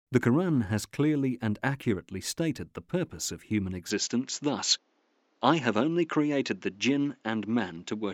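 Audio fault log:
3.90–8.14 s, input switched to a poorer device: after "the purpose of human" the speech abruptly dulls, losing everything above 7.6 kHz and gaining a faint new noise floor, likely a microphone change. The spectrogram's upper band ends sharply, while the waveform shows no gap or clear level step.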